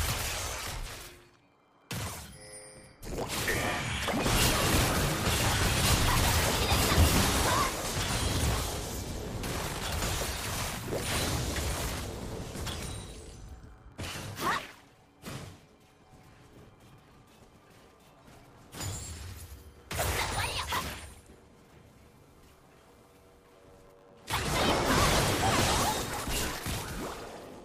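Throughout, a 100 Hz buzz sits under the sound, which runs about 1.09 times fast at near-normal pitch: a block size mismatch (truncated), discarding each block's tail.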